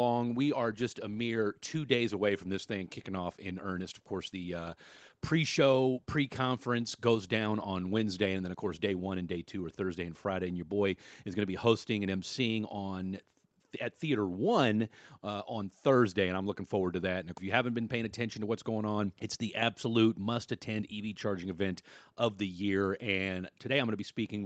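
From the opening moment, the sender's audio clock runs roughly 4 percent fast relative to the receiver's. This is clock drift between sender and receiver. Audio arrives a little quicker than it is played out, so the jitter buffer keeps filling. Unlike a network jitter spike or packet loss, there are no gaps or sudden bursts, only a steady one-sided pressure that lasts the whole clip. The speech stays continuous but never quite settles into a stable pace.

The drift shows up as repeated timing corrections from 0.14 s to 24.34 s. To keep the buffer from overflowing, the receiver keeps trimming short slices of audio, so the material is effectively pushed through at 104 percent speed. Each cut is tiny and they fall at uneven intervals, heard as faint hiccups and a slightly hurried, unsteady tempo. Packet-loss concealment leaves smeared or repeated fill instead. Here every edit removes audio, always in the same direction. 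The call path itself, through an Opus codec whose sound points to about 24 kbps, stops at 8 kHz.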